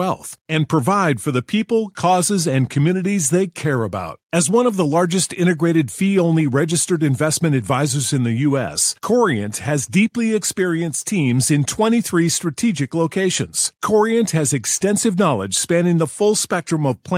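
A recording of speech with no technical fault to be heard in it. Nothing goes wrong at any point, so there are no times or causes to give.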